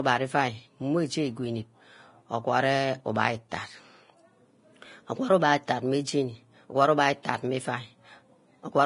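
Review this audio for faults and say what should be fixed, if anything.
Heavy lossy coding, likely Vorbis compression at a low bitrate around 30 kbps, strips the treble and quantises what remains very coarsely. Nothing survives above 10.5 kHz, and the speech sounds hissy and grainy throughout, with roughened tones and blurred attacks.

Pre-echo occurs because the codec spreads its quantisation noise across each whole transform block, so noise sized for a sharp onset also fills the quiet just before it. A brief hiss precedes the attacks at 5.67 s and from 7.23 to 7.25 s, just before "meh iuah", smearing both onsets.

Encoding at a much higher bitrate or quality setting would preserve the treble and shrink the quantisation noise behind both faults.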